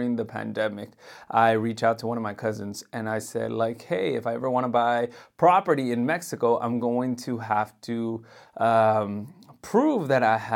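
Nothing here trips up the ear: the speech runs along without a single dropout, glitch or distortion to point at.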